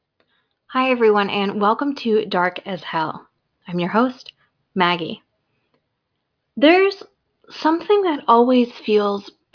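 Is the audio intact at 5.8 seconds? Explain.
Yes, the audio is intact at 5.8 seconds, with no audible fault at that point.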